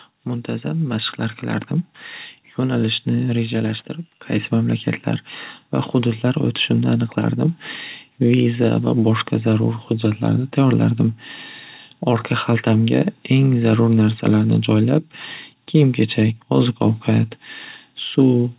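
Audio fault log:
0.27 to 1.22 s, automatic gain rising: The speech and the background noise swell together over about a second. The automatic gain control judged the input too quiet and raised its gain gradually, by about 4 dB, so everything in the signal grows at once.
1.99 to 4.69 s, loudspeaker feedback squeal: A single tone at 4.6 kHz grows over roughly two seconds into a squeal, ending a few decibels above the speech. The microphone is picking up its own loudspeaker. At this frequency the loop gain exceeds one, so the tone feeds itself.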